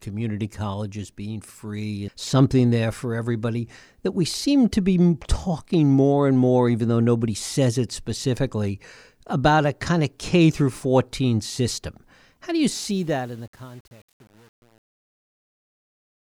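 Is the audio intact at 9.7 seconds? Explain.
Yes, the speech at 9.7 seconds is intact, with no dropout, click or other fault at that moment.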